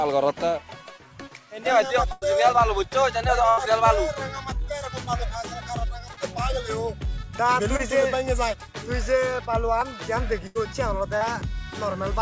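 The audio passes through a call path whose band stops at 8 kHz, consistent with a wideband call codec such as G.722. Over that it carries three kinds of fault. At 1.20 s and 9.81 s the sound jumps forward slightly, with no gap. A waveform shows a vertical step discontinuity, and a spectrogram shows a thin full-height line. This is likely a dropped buffer (overrun), with roughly a hundredth of a second skipped because samples were overwritten before being read. Bursts of packet loss occur at 2.12–2.24 s, 3.50–3.59 s and 10.47–10.57 s, losing 100, 80 and 80 ms. Across each span the receiver extends the last sound and lets it fade: a held buzz if it was voiced, a dying hiss if not. The audio then resumes further on with that stretch missing. On a spectrogram this looks like frozen, repeating harmonics or a smooth noise block decaying toward the edge, and the waveform envelope tapers down. 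Short concealed packet loss occurs at 6.13–6.19 s, 7.77–7.81 s and 11.17–11.23 s, with 40, 20 and 40 ms lost. These holes are patched with continued pitch or shaped noise and blended back, so they are heard as a brief smear or wobble. Each appears as a short smoothed patch where fine spectral detail blurs, and the waveform shows a slightly too-regular few cycles.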